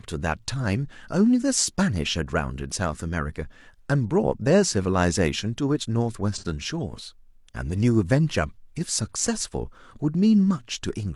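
At 6.34 to 6.44 s there is AAC frame loss with concealment: about 43 ms of audio, consistent with a single lost frame, is rebuilt from the previous spectrum, giving a brief smeared, noisy patch. A spectrogram shows blurred, harmonically flattened energy there, and the waveform loses its fine structure.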